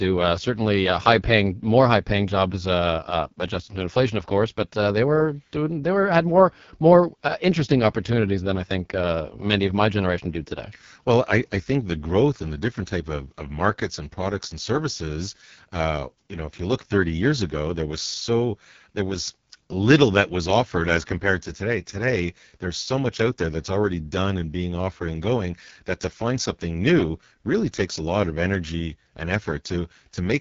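From start to finish the speech runs through an AMR wideband (HD Voice) codec, and it's being pushed hard. There's nothing above about 7.4 kHz, and the rough, raspy buzz on every phrase points to the codec's lowest rate, around 6.6 kbit/s. At that rate the pulse-driven vocal tract model is starved of bits, so voicing turns gritty. The top band is just shaped noise standing in for real detail, which leaves a hissy, artificial edge.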